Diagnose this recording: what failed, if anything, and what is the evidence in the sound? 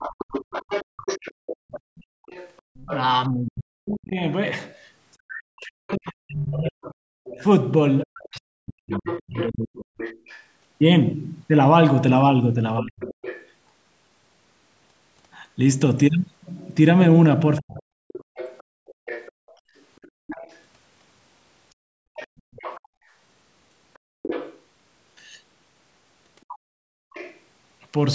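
Other side's voice leaking through, call processing stage: from 0.0 to 13.48 s and again from 17.58 to 27.4 s a second voice sits about 15 dB under the talker, likely residual loudspeaker echo the canceller failed to subtract. Unlike crosstalk in wiring, it tracks the far end's turns.

Background gated by the echo canceller: the room tone falls away by about 33 dB between 0.85 and 2.75 s, roughly a second in all, and by about 32 dB across 18.24 to 27.14 s, some three seconds in total. The canceller's suppressor clamped the microphone while the loudspeaker played. Network dropouts would also take out the voice, not just the ambience.

Speech suppressed in double talk: between 3.29 and 13.09 s the talker's own voice dips by around 40 dB in pieces, about five seconds in total, and it ducks briefly from 17.6 to 17.85 s. The canceller, likely unable to separate near speech from echo during overlap, attenuated both. 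Packet loss would not line up with the other side talking.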